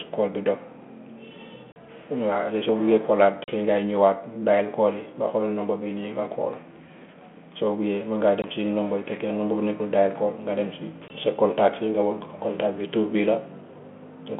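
Speech over a narrowband telephone line, with four hard-edged silent holes at 1.72, 3.44, 8.42 and 11.08 seconds. After each gap the voice comes back with brief, slight distortion. This is packet loss on an ADPCM call: one or two packets, about 40 ms at the first two points and 20 ms at the later two, went missing. The G.726 decoder's adaptive predictor and step size then have to realign with the sender's before the 32 kbit/s, 3.4 kHz-limited sound settles.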